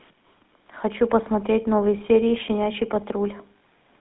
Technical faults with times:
0.00-4.00 GSM full-rate codec
3.58-3.60 lost GSM frames

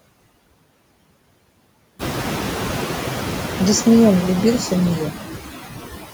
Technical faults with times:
0.00-6.13 noise suppressor artifacts

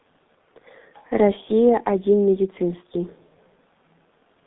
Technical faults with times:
0.00-4.47 G.723.1 codec

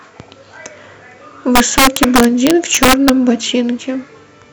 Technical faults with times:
1.55-3.09 integer overflow

